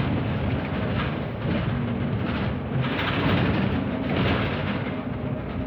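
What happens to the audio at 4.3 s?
Nothing goes wrong at 4.3 s; the sound carries on intact through that moment with no dropout, click, distortion or other audible fault.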